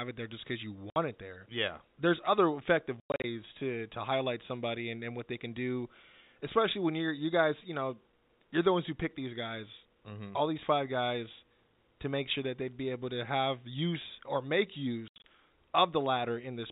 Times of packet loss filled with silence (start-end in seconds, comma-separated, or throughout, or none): 0.90-0.96, 3.00-3.24, 15.08-15.23